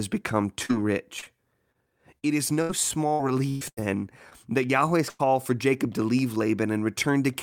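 Choppy, robotic speech runs from 0.65 to 4.33 s: eleven short holes, the longest 118 ms, patched by stretching the last sound. This is repeated packet loss (robotic sound). At 5.09 to 5.21 s a fill continuing the last sound and fading replaces about 100 ms of audio, a burst of packet loss the receiver concealed before resuming further on.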